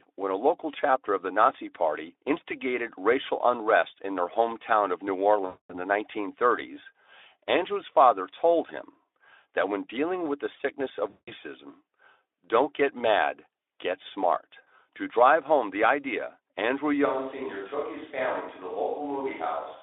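At 5.45 to 5.72 s and again at 11.09 to 11.33 s, VoIP packet loss concealed by the speech codec replaces about 240 ms and then 180 ms of audio. The decoder keeps repeating its last pitch and vocal-tract filter with shrinking gain, so each gap turns into a buzzy, smeared tone that fades away. On a spectrogram, flat, unnaturally steady harmonic bands thin out over the gap. The waveform shows a decaying, periodic envelope. The sound stays weak for a moment after each gap.

From 17.07 s to the end, the sound abruptly becomes roomy and hollow, with thinner low end. It drops by about 5 dB and carries background noise roughly 35 dB below the speech. This is likely a switch to a distant microphone. On the waveform, the amplitude steps down at that instant. The spectrogram shows a raised noise floor between phrases and blurred, reverberant tails on each sound. All of this sits within the Speex line's 300 Hz to 3.6 kHz band.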